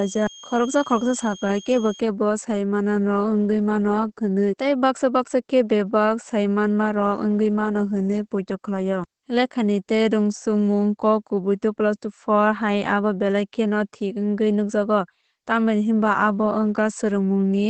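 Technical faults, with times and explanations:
Throughout: Opus voice compression. Nothing is present above 8.5 kHz, and the speech sounds muffled, hoarse and slightly robotic. This fits the SILK linear-prediction coder in wideband mode at a low rate around 12 kbps, coding the excitation coarsely in 20 ms frames.
0.0–2.0 s: switching supply whistle. A high whistle sits roughly 20 dB below the speech, drifting between 3.23 and 3.26 kHz. It comes from a switching power supply running in an audible burst mode or beating with another one, its pitch wandering as the load shifts.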